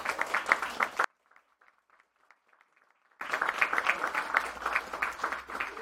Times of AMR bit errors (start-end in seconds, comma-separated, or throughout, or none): none